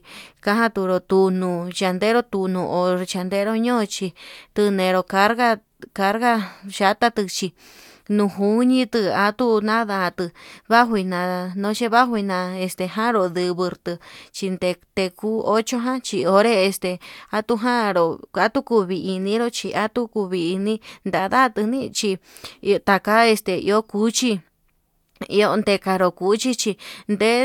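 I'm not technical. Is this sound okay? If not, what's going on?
Yes, no technical faults can be heard anywhere in this speech recording.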